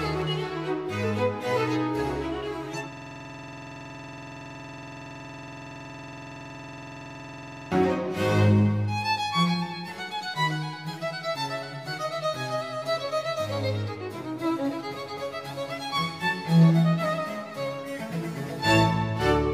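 From 2.93 to 7.72 s, a system hang loop replays one 46.4 ms slice (fitting a 2048-sample buffer), giving a rough 21.5 Hz rattling stutter.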